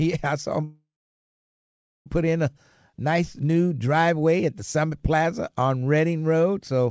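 Right after "I saw them" at 0.64 s there's a call audio freeze until 2.08 s: the tail smears into a fading buzz then about 1.2 s of silence before "put in a nice" resumes intact, likely a stalled jitter buffer.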